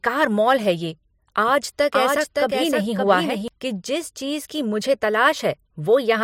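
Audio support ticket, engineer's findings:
Doubled audio track, 1.48–3.48 s, after "मॉल है ये", clearing before "कि जिस चीज़ की". Second full-band copy about half a second late, about 5 dB down. Likely a slower duplicate capture path or misaligned edit. Unlike echo or reverb: single repeat, no decay, no room colour, abrupt on/off.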